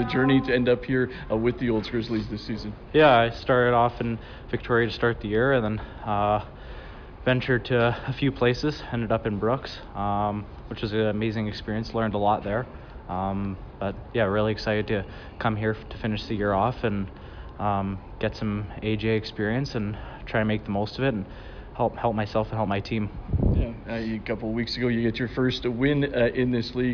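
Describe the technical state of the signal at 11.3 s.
At 11.3 s the signal is intact, with no dropout, distortion, noise burst or other fault audible at that moment.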